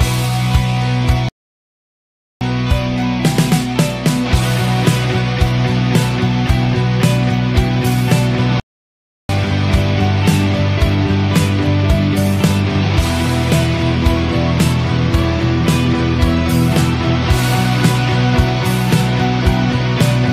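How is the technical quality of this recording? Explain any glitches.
The recording has two playback stalls. From 1.29 to 2.41 s and from 8.60 to 9.29 s, the sound cuts out mid-flow for about 1.1 s and 0.7 s, then resumes. The player likely ran out of buffered data. Each gap appears as a flat waveform and a blank vertical band on a spectrogram.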